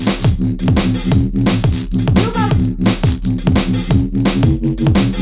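Nothing goes wrong anywhere in these everyday sounds, so there's no fault to describe at any point.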